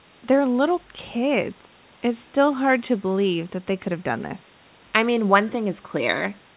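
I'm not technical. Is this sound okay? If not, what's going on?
Yes, no faults: this is ordinary phone-call audio, and the call line keeps nothing above about 4 kHz, which is normal.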